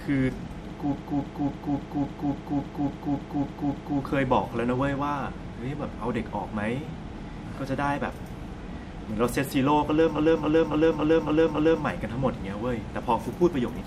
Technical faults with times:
0.91-3.97 repeated frames
10.15-11.82 repeated frames

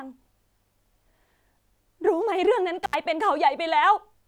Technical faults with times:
2.84-2.95 intermittent contact

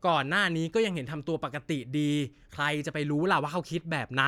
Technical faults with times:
none

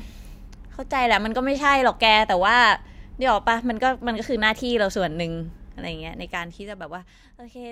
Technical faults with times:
5.87-7.29 zipper noise

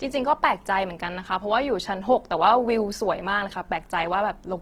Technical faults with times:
0.00-4.61 Opus compression

